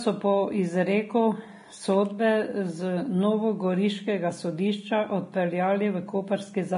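From start to finish, the speech stops dead at about 10.5 kHz, with nothing above it. The sound is dull. This is likely low-bitrate audio saved at a high bitrate. The losses fit an earlier low-rate encode that the later high-rate MP3 cannot restore.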